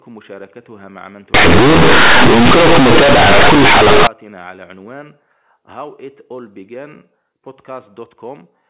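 From 1.34 to 4.07 s the speech turns into harsh, very loud buzzing with heavy noise filling the gaps. That's companded audio read as linear: mu-law bytes played as plain 8-bit samples without expansion, so quiet moments blow up to full size.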